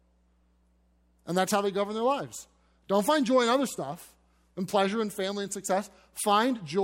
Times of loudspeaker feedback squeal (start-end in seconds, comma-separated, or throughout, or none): none